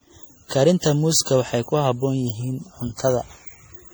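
From start to finish the speech carries generation loss: swirling, hollow, smeared tone with blurred consonant onsets, likely from around ten successive MP3 encodes at about 64 kbit/s. A spectrogram shows patchy holes and ragged high-frequency bands; the waveform's transients look softened.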